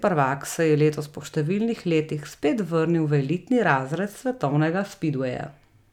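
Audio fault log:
No fault can be heard anywhere in the speech. Nothing in the recording needs a line in this log.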